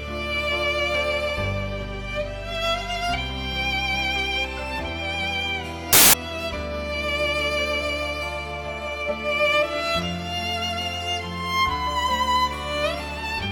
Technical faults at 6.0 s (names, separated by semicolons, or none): samples built from the wrong bytes